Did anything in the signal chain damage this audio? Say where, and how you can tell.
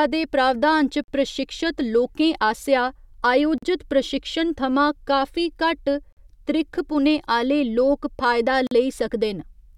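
Yes: gaps between chunks at playback or storage. Hard-edged 44 ms silences at 1.04, 3.58, 6.13 and 8.67 s recur every 2.5 s of sound. Speech resumes intact rather than skipping, unlike packet-loss dropouts.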